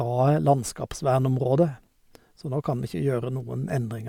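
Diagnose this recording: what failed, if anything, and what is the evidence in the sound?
Nothing in this recording points to a failure at any stage of the chain. The speech comes through intact, with no event in the sound that calls for a diagnosis.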